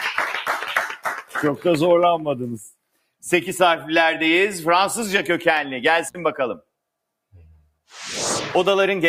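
A noise suppressor designed for speech was left running on this audio, so throughout the clip it treats sustained tones, ambience and reverberant tails as noise and pulls them down, leaving the level pumping and fluttering by roughly 5 dB while sharper onsets pass more intact. In two places that same noise suppressor cut the sound itself far harder. Between 0.4 and 1.4 s, held and decaying material sinks by up to about 20 dB for around seven-tenths of a second in total. From 2.93 to 3.23 s it drops by up to about 21 dB for roughly a fifth of a second, with tails clipped short. Separately, an intermittent contact, most likely a loose cable or plug, opens between 6.06 and 6.18 s. The signal disappears for about 61 ms, with crackle at the break and return and faint hiss left during the gap.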